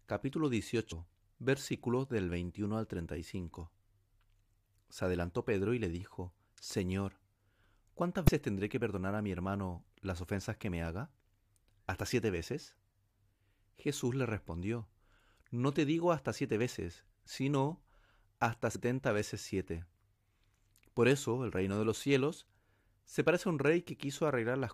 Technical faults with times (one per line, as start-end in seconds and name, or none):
0.91 compressed frames skipped
8.24-8.30 compressed frames skipped
18.74 compressed frames skipped